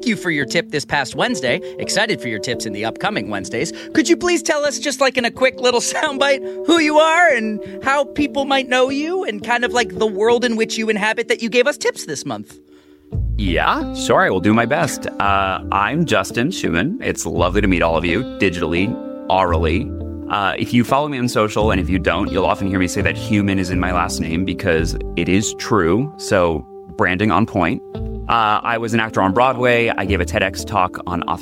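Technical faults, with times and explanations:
12.83 s, corrupt frame decoded: bit errors damaged a few consecutive compressed frames, and the decoder played them instead of discarding or concealing them. The misread gain and spectral codes put energy at frequencies where the sound has none, so for under two hundredths of a second a short chirp, squeak or burst of noise unrelated to the surrounding audio is heard. It stays quiet, peaking around -45 dBFS, and stops as soon as clean frames resume.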